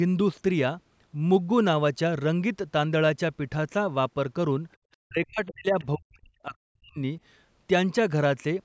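From 5.03 to 6.98 s the speech repeatedly dips and drops out in pieces. At its deepest the level falls by something like 40 dB, close to silence, and the affected stretches add up to roughly a second and a half. This is speech suppressed in double talk. The likely cause is both ends talking at once, so the call's echo canceller could not tell the local talker apart from loudspeaker echo and turned the microphone signal down.

Within that same stretch, from 5.79 to 5.85 s, a brief scrap of a second, faint voice slips through, sitting around 30 dB below the main speech. This is the other side's voice leaking through. The far end's audio, played on the talker's loudspeaker, was likely picked up again by the microphone, and the echo canceller left this short fragment in place. The call's microphone processing, which leaves nothing above 8 kHz, runs through the whole clip.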